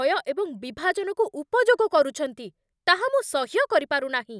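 No technical faults are audible.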